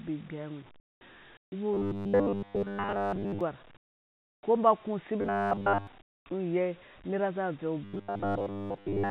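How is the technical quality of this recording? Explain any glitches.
The recording has two recurring faults: the background drops out into synthetic noise four times, and three stretches turn buzzy and mechanical. Everything is band-limited, with nothing above 4 kHz, as expected from a G.711 A-law call path.

Comfort noise in place of the background occurs at 0.80 to 1.01 s, 1.37 to 1.52 s, 3.77 to 4.43 s and 6.02 to 6.26 s. The likely cause is discontinuous transmission: the sender went silent in pauses and the receiver generated stand-in noise. The background, sitting about 27 dB below the loud parts, becomes a flat, featureless hiss that is about 28, 15, 29 and 20 dB quieter.

Robotic sound from repeated short buffers appears at 1.74 to 3.41 s, 5.21 to 5.87 s and 7.84 s to the end. Audio likely arrived too seldom, so the receiver kept replaying the latest fragment. The repetition imposes a fixed 100 Hz buzz, which fits a 10 ms repeat length. 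In the middle stretch it is constant, and in the other two it is present most of the time.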